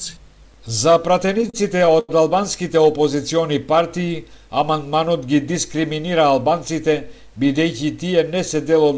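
From 1.26 to 2.11 s, repeated stalls (stutter): the jitter buffer ran dry eight times, each gap filled by extending prior sound (longest 91 ms), so audio drags without loss. The call path's content stops at 8 kHz.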